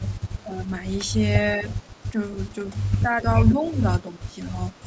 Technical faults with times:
0.00-0.72 speech suppressed in double talk
0.38-0.42 echo leak
1.61-1.67 speech suppressed in double talk
1.74-2.04 echo leak
2.70-4.33 speech suppressed in double talk
3.51-3.72 echo leak
4.74-4.84 echo leak

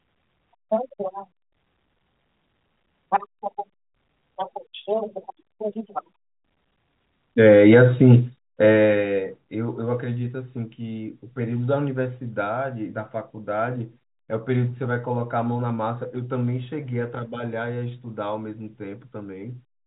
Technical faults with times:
none

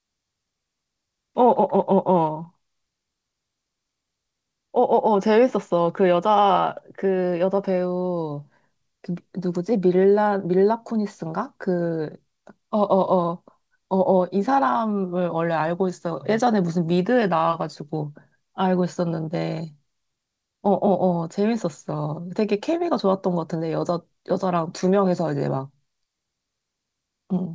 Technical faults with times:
none

